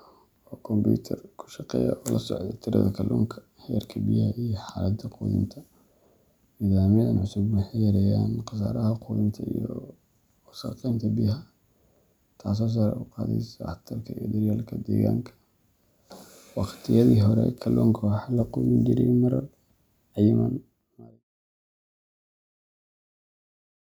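Speech recording; no technical faults are present.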